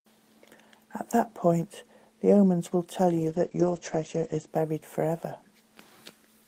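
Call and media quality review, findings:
Call bitrate drop, 3.2–4.53 s: encoder starved, likely fitting roughly 32 to 12 kbps. Speech turns coarse and watery, top end cut from 20 kHz to 8 kHz for about 1.2 s.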